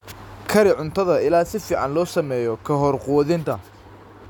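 No technical faults can be heard in the speech recording at any point.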